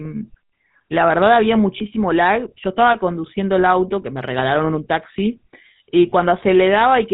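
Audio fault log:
throughout: GSM full-rate codec. Speech has a buzzy, gravelly roughness and nothing above 4 kHz. The vocal tract is modelled and driven by sparse, evenly spaced pulses, which fits 13 kbps full-rate coding. The damage is plainly audible.
1.78–1.84 s, 4.02–4.04 s, 6.10–6.12 s: lost GSM frames. Each gap is a brief rough, metallic ring. The decoder repeats the last good frame's settings. Each gap fits a single lost 20 ms frame, so nothing fades fully to silence.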